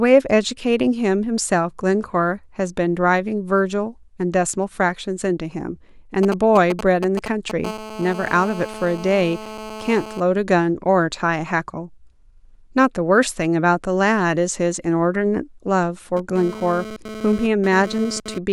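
From 6.23 to 7.65 s, GSM signalling bursts break in: a nearby 2G phone's intermittent radio bursts are rectified by the audio circuitry, giving a galloping dit-dit-dit of brief 217 Hz buzzes, nearly as loud as the speech.

From 7.65 to 10.20 s the phone settles into a call, producing steady GSM phone buzz, a raspy, harmonic-rich 217 Hz tone about 14 dB below the speech. It returns from 16.17 to 18.38 s at about 13 dB down, now fluctuating with data transfer.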